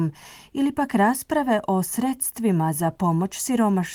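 No technical faults are present.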